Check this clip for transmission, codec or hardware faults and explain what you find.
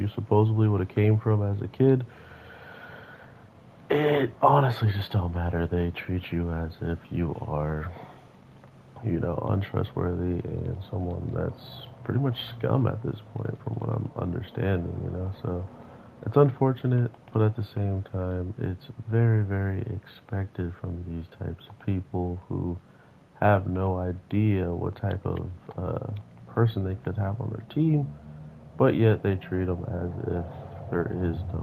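Nothing audible points to a transmission, codec or hardware fault anywhere in the clip.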